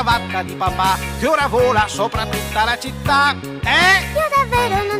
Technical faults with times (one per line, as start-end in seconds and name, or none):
none